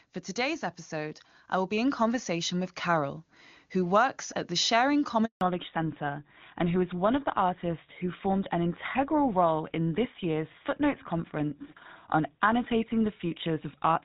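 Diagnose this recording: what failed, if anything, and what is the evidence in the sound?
Call processing: an automatic gain rising fault runs from 0.39 to 3.29 s. Over nearly three seconds the level climbs by about 6 dB, and the background rises together with the speech. That shared swell is the signature of the gain control. It judged the incoming signal too quiet and raised its gain slowly, rather than the talker getting louder. Because the ramp is gradual, the gain stage is to blame, not the acoustics.

Network: a handover gap sits between 5.25 and 5.41 s. The speech fades out within a few tens of milliseconds and stays silent for 160 ms, until the new link starts. This happens because the call was passed from one network link to another and no speech frames were delivered during the switch. The receiving end had nothing to decode, so whatever was spoken in that window is simply missing.

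Codec: a fallback to narrowband begins at 5.41 s, right as the new link picks up, and lasts to the end. Before the gap, the HD Voice wideband coding carries the upper band cleanly. After it, nothing remains above 4 kHz. Sibilants lose their edge and the speech sounds duller and grittier. The bandwidth ceiling and coarser texture fit a renegotiation from AMR-WB down to an older narrowband codec such as GSM full rate.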